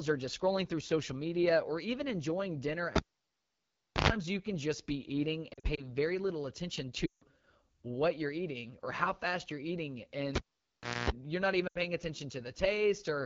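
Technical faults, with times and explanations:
Throughout, AMR wideband (HD Voice) codec: The speech has a plainly rough, raspy grain. The codec models the voice with pulses driving a vocal tract filter up to 6.4 kHz and fills 6.4 to 7 kHz with shaped noise. At this quality, which points to one of its lowest modes around 8.85 kbit/s, too few bits describe the excitation, so the voice sounds buzzy and coarse.
2.96–4.10 s and 10.35–11.10 s, cable pulled and plugged in: Each begins with a pop, then near silence for about 1.09 s and 0.69 s. As the plug goes back in, a mains buzz rises, lasting about 0.11 s at 50 Hz the first time and about 0.24 s at 60 Hz the second. That buzz is the ungrounded tip touching first, before a second pop marks the return of the signal.
5.53–5.85 s, 7.06–7.25 s and 11.67–11.81 s, lost AMR speech frames: Radio errors broke frames, and the decoder filled the gaps by repeating its last good pitch and vocal tract settings at falling gain. 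At 5.53 s about 0.1 s goes missing in short scattered gaps, no longer than 40 ms each, across 0.24 s, giving brief warbles. At 7.06 s about 0.16 s is lost and at 11.67 s about 0.08 s, so the sound drops to near silence within two frames before returning briefly weak.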